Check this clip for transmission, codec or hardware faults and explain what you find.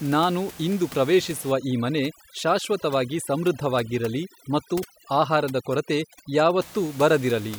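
Overdone noise removal, from 1.52 s to 6.63 s: the suppressor is set too hard, pushing bands near its noise estimate down or off, quiet speech detail included. Room noise, about 19 dB below the speech, drops and breaks up into twinkling specks.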